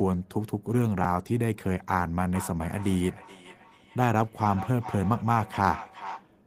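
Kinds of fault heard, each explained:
Chunks out of order: a 10 ms block of audio was written three chunks late, so it plays after material that should follow it. Nothing is missing, but around 1.01 to 1.05 s the order scrambles briefly, with hard joins and a jumbled blip.
Feedback echo between two devices: a second device in the room replays what this microphone sent, and the microphone catches it again, which its own echo canceller cannot remove. From 2.35 to 6.34 s each sound returns roughly every 0.4 s, thinner and ringing, peaking at about 13 dB below the speech.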